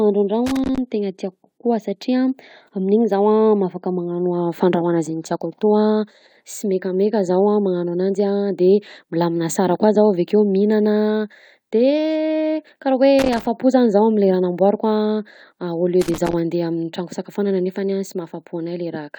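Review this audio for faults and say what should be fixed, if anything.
Loose connector crackle at 0.46 to 0.78 s, 13.19 to 13.47 s and 16.01 to 16.33 s in this speech: a worn or dirty contact briefly loses and regains connection, chopping the signal into irregular scratchy bursts about a third of a second long. Clean or replace the offending cable and connectors, and secure them so they cannot move during recording.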